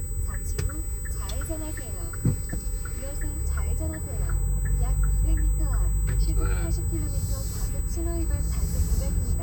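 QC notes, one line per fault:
Throughout, USB whine: a steady high tone at 8 kHz, about 15 dB below the sound, from USB microframe current leaking through power or ground.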